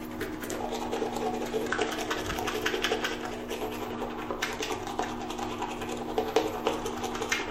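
A recording of everyday sounds with damaged data in its compressed stream, heard as brief glitches at 0.56–0.60 s, 1.68–1.72 s and 3.90–3.96 s, where the decoder misreads corrupted frames and resyncs. Each appears as a short broadband smear on a spectrogram and an abrupt waveform discontinuity.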